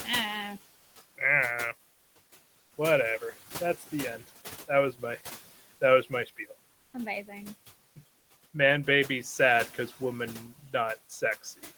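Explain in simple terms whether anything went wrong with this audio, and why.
Several things went wrong, all in how the sound was cleaned up and sent.

Noise suppressor artifacts run through the whole clip. A filter keeps pushing the steady background down between phrases and letting it back up under the speech. The leftover hiss can flutter or warble, and the speech can sound a bit thin.

Comfort noise in place of the background appears three times: from 0.77 to 0.95 s, from 1.93 to 2.15 s, and from 2.59 to 2.71 s. These gaps last about 180, 220 and 120 milliseconds. In each one, the real room sound is swapped for a smooth, featureless hiss. The likely cause is that the sender stopped sending during the pauses, and the receiver filled them with made-up noise.

Speech cut by the noise suppressor happens between 6.03 and 6.51 s, right after "was my that". The filter mistook some quiet speech for noise and turned it down. 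About a tenth of a second in total sounds swallowed or faint.

The room noise under the speech belongs to the recording itself.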